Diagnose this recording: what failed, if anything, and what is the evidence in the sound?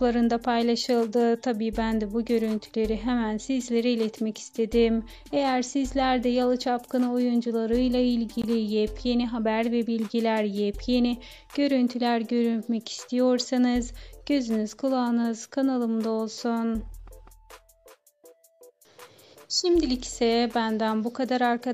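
At the codec stage, separately encoded pieces were joined without trimming the encoder delay and final-frame padding. At 8.42 s the continuous sound drops into a silence of about 20 ms (19.5 ms) with smeared edges, then resumes exactly where it stopped: a gap at a join of encoded pieces.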